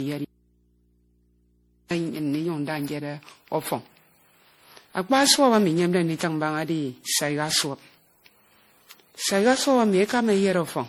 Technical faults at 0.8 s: generation loss; audio dropout to a faint residue

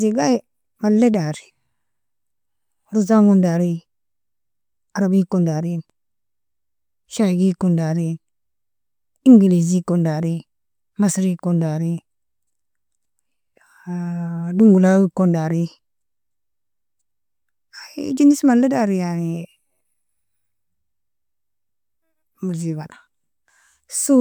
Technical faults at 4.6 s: none

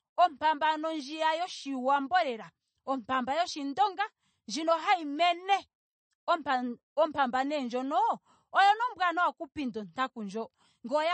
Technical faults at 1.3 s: MP3 compression

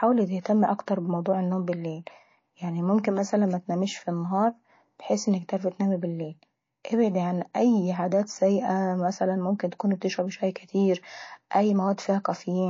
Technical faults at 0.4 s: MP3 compression; pre-echo

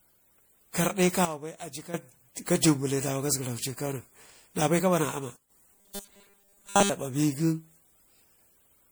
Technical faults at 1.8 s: generation loss; sudden gain jump

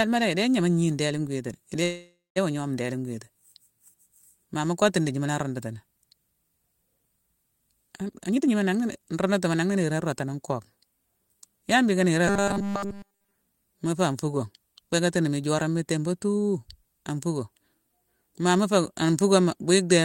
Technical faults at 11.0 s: none

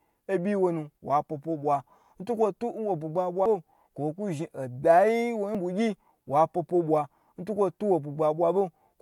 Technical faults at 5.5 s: dropped buffer (overrun)

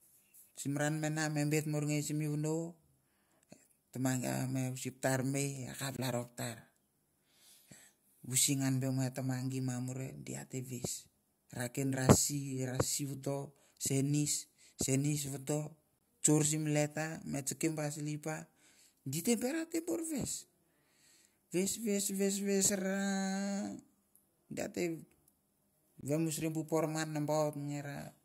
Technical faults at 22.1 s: none

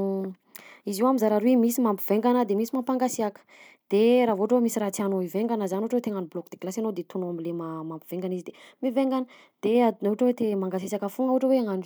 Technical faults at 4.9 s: none

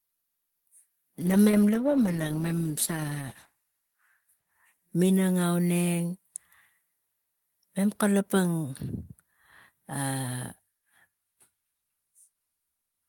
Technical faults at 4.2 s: call bitrate drop

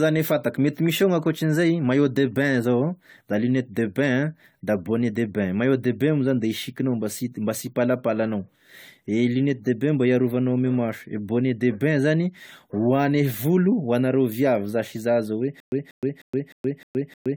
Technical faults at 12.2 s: generation loss

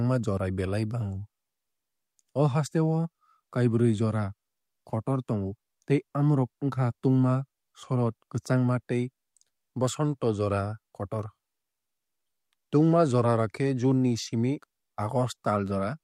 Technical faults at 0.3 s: none

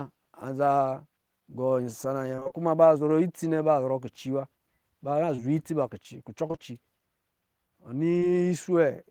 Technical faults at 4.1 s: none

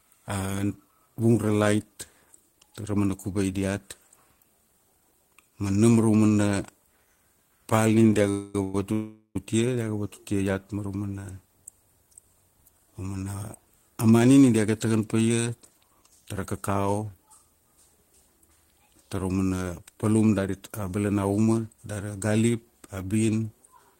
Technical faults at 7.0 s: none

